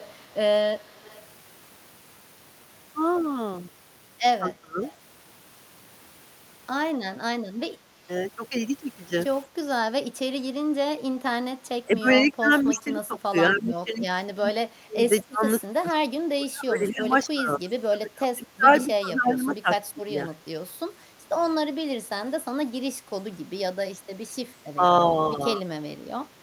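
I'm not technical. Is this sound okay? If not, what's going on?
No, there are a few call-related problems, all coming from the echo-cancelling system on a speakerphone-type call.

First, an echo leak: from the start to 1.2 s, and briefly at 4.83 s and 12.75 s, there's a faint copy of the speech about a quarter of a second late. That's likely the far side's loudspeaker sound sneaking back through their microphone.

Second, speech suppressed in double talk: the speech dips, gets dull or breaks up at 4.42 to 4.79 s, off and on between 10.3 and 20.47 s (about seven seconds of that is affected), and more mildly from 24.76 s to the end. Likely both sides talking at once, so the echo canceller turned everything down.

Third, background gated by the echo canceller: the room sound briefly sinks and comes back, in short dips adding up to about a third of a second between 9.56 and 11.58 s, plus a quick, shallower dip around 21.09 to 21.23 s, while the canceller clamped the microphone.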